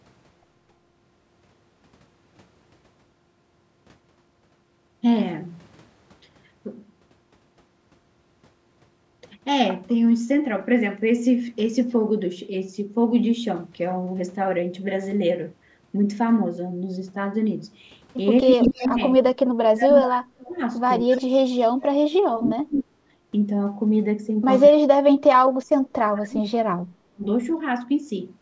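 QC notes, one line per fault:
18.41–19.0 s, 19.36–20.61 s, 21.15–22.93 s, 24.7–25.41 s, 25.59–27.25 s: speech suppressed in double talk. The level falls in pieces, by roughly 20 dB in the first stretch and as much as about 40 dB in the later ones, so the talker thins out or vanishes mid-phrase. The likely cause is an echo canceller that treated overlapping far-end speech as echo and ducked everything. On the waveform the envelope shows sudden notches. On the spectrogram the harmonics fade or go blank in patches.
18.64–18.88 s and 21.11–21.22 s: echo leak. A fainter, delayed copy of the voice trails it by 249 ms, at roughly 10 dB and then about 15 dB below the direct speech. It sounds like a brief repeat. It is likely loudspeaker pickup that the far end's canceller failed to remove and sent back. On the spectrogram a weaker duplicate of the formant pattern appears shifted a quarter-second later. 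The band still stops at 8 kHz, as the call processing leaves it.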